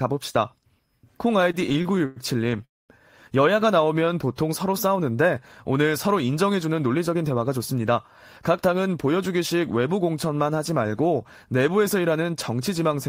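Repeated stalls (stutter) run from 1.41 to 2.64 s. Packets kept reaching the receiver late, so its jitter buffer ran dry seventeen times. Each gap was filled by continuing the last sound, the longest for 105 ms, about 289 ms in all and nearly a quarter of that stretch. The speech drags and stutters, though none of it is lost.

A call audio freeze follows from 2.64 to 2.91 s. The receiver continues the last sound briefly, then it falls to silence for about 220 ms before the speech resumes where it stopped. About 244 ms is inserted and nothing is missing. The likely cause is packets held up on the way, which emptied the buffer and pushed the playout delay back by that same 244 ms.

A jitter buffer slow-down occurs from 3.85 to 4.37 s. To rebuild its reserve, the receiver repeated single pitch periods many times in a row. This adds 52 ms, so the speech plays at 91% speed with unchanged pitch and sounds drawn out.

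A jitter buffer speed-up spans 6.44 to 7.57 s. The buffer held more audio than its target, so the receiver cut short pieces of one or a few pitch periods, removing about a tenth of a second. The speech runs at 108% speed at the same pitch and sounds hurried.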